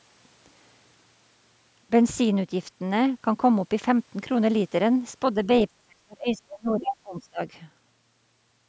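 A speech recording in which, from 5.68 to 7.41 s, the talker's level drops sharply, by around 35 dB at its deepest, with the losses adding up to roughly one and a half seconds. On a waveform the envelope collapses in uneven chunks; on a spectrogram the energy thins and vanishes in patches below the 8 kHz ceiling set by the call's microphone processing. This is speech suppressed in double talk, likely an echo canceller muting the near talker while the far side spoke.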